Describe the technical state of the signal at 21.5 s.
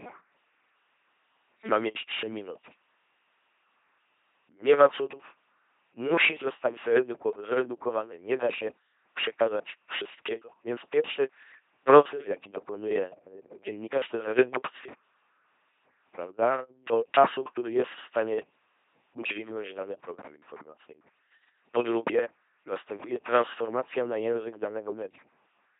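At 21.5 s the speech is in the middle of LPC-10 vocoder damage that covers the whole clip. Each instant is rebuilt from a pulse train or noise through a ten-pole filter, giving a heavy buzzing robotic sound with nothing above 3.8 kHz, which fits a 2.4 kbit/s vocoder.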